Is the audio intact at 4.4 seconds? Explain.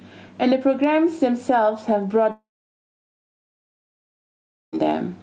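No, 4.4 s falls inside a long network dropout running from about 2.31 s to 4.75 s. Likely no audio arrived for that stretch, so the receiver carried the last sound briefly as a fading buzz or hiss, then settled into near silence until the sound resumes with that stretch missing.

There's also gain pumping throughout, likely from the gain being set far too high with a fast limiter clamping down on every loud sound. The gain swings by roughly 10 dB around louder moments, leaving everything squashed.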